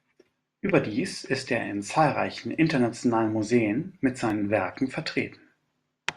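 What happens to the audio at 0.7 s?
A brief garbled flutter runs from 0.67 to 0.74 s, just before "ist er in zahlreichen": frames out of order, two neighbouring 20 ms frames played swapped.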